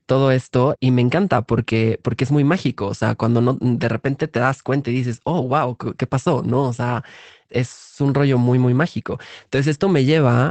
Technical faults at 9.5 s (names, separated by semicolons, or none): lost packet rebuilt from error correction